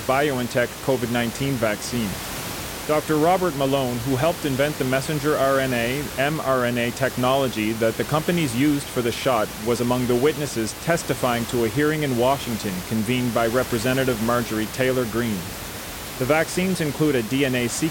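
Nothing in this speech goes wrong on the technical side; the only thing underneath it is the room's own background noise, sitting about 11 dB below the talking, which belongs to the recording itself.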